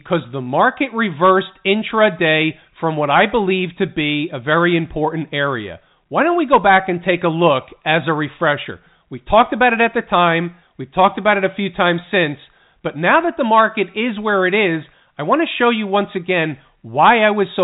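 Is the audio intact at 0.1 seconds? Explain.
Yes, at 0.1 s the speech is intact, with no fault at that moment beyond the narrow telephone band of its G.711 coding, which lets nothing through above about 3.8 kHz.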